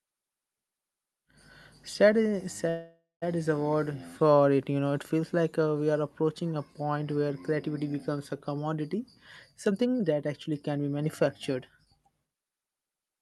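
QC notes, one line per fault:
2.69–3.24 s, call audio freeze: the sound stalls just before "is a word", held as a fading buzz or hiss ending in about 180 ms of silence. Likely delayed packets emptied the jitter buffer; nothing is lost, only pushed about 0.52 s later.
8.94–9.01 s and 9.67–13.18 s, jitter buffer speed-up: after "where creativity becomes a", speech briefly runs at 164% speed, then at 113% to the end, same pitch. Short pitch-period chunks are cut, roughly 50 ms, then about 0.4 s, to drain the surplus delay, so it sounds hurried.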